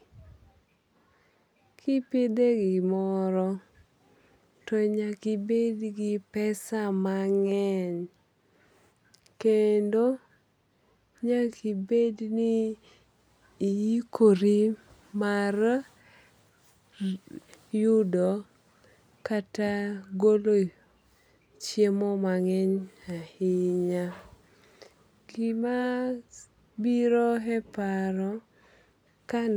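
Listening to this recording of speech, nothing stood out as a technical problem.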